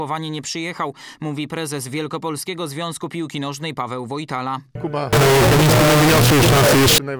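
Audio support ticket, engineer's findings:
Harsh, very loud near-square buzz, 5.13–6.98 s, sitting at an almost fixed, high level; background noise as loud as foreground, pitch still traceable. Float read as integer: likely 32-bit float samples decoded as 32-bit integer, sign/exponent bits dominating amplitude.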